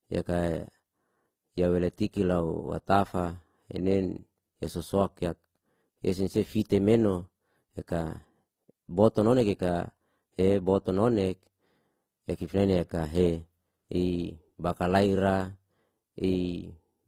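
Throughout the speech there is a layered, smeared quality: swirly, metallic tonal artefacts from one codec sit alongside a different grainy, watery texture. This points to likely transcoding between lossy codecs, a chain that fits HE-AAC at 24 kbit/s re-encoded to Opus at 24 kbit/s, with the second encoder spending bits on the first one's damage. On a spectrogram, nothing appears above 19.5 kHz, and the upper bands show patchy, blocky holes.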